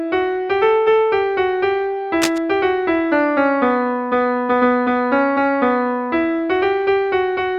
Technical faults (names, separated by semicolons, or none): cable scratch noise